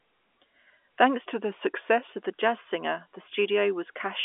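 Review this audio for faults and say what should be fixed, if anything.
From 1.31 to 2.13 s the speech drags and drops in pitch, about 6% slower and roughly 109 cents flat, just over a semitone, then snaps back before "of the jazz singer". This is likely a drift correction step, where clock-matching software abruptly changed the playback rate to rebalance its buffer. Correcting clock drift with small, gradual rate adjustments instead of one large jump would prevent it.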